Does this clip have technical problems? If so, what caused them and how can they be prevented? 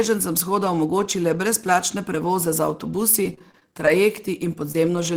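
Yes. From 3.23 to 3.88 s the speech turns choppy and robotic. This is repeated packet loss: seven gaps, the longest 30 ms, about 120 ms in total, each patched by stretching the previous sound. A steadier network path with a larger jitter buffer would prevent this.

At 4.23, 4.33, 4.42, 4.45, 4.74 and 4.96 s, brief rough, noisier 10 ms moments appear without gaps. Each is a lost packet rebuilt from error correction, played from the low-bitrate copy carried in the following packet. Reducing packet loss on the link would remove the need for these coarser copies.

From 4.72 to 4.75 s a short smear interrupts the audio. This short concealed packet loss left about 20 ms missing, which the decoder filled by continuing the preceding sound. Better network stability or a slightly deeper jitter buffer would prevent it.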